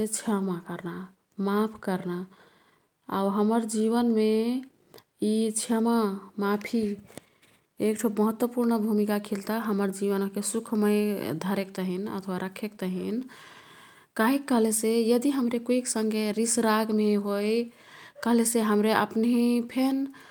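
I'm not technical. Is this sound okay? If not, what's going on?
Yes, nothing stood out as a problem when listening to this recording.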